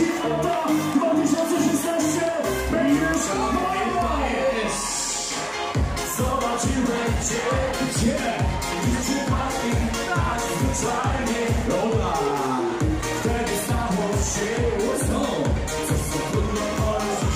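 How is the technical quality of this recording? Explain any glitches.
No technical glitches are audible.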